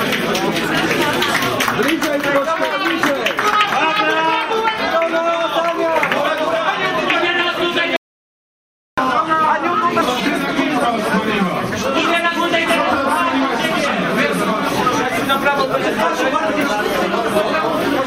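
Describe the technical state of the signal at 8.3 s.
At 8.3 s the signal sits inside an audio dropout to silence running from 7.96 to 8.98 s, so about 1.01 s of material is missing. The sound stops abruptly mid-flow and resumes just as abruptly. The likely cause is that the input was briefly lost while recording carried on writing silence. Unlike a noise gate or a quiet passage, the gap holds no room tone or residual hiss at all, only dead silence.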